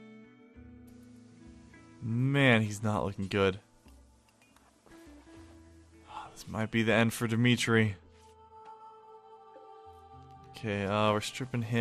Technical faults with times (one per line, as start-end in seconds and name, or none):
0.00-11.80 MP2 compression